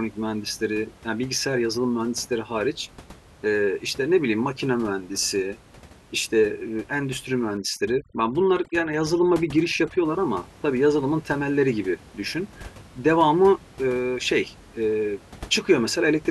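From 7.57 to 10.05 s, overdone noise removal sets in. The suppressor cuts frequency bands it judges to be noise, taking quiet speech detail with them, so the room noise, elsewhere about 23 dB below the speech, drops and breaks up into twinkling specks.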